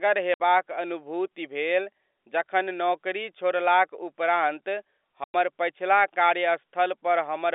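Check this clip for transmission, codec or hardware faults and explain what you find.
The speech has two short dropouts, both from packet loss filled with silence, carried over a G.711 telephone line whose narrow band, roughly 300 Hz to 3.6 kHz, sounds as expected.

Packet loss filled with silence: at 0.34 to 0.40 s, just before "अनुभूति भेल जखन नौकरी", and at 5.24 to 5.34 s, just after "जखन नौकरी छोड़लाक उपरान्त", the sound stops dead for 60 ms and then 100 ms, with hard edges. Lost packets were replaced by pure silence. Both gaps are multiples of 20 ms, which fits 20 ms packets.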